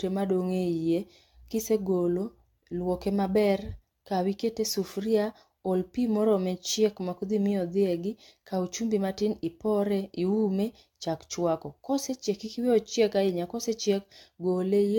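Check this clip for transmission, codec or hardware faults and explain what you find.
There's one problem, and it runs the whole clip: generation loss, likely from about seven passes through AAC-LC, which fits around 96 kbit/s. Each re-encode stacks new quantisation noise, so the speech sounds swirly, hollow and smeared, attacks blur, and nothing remains above 17 kHz.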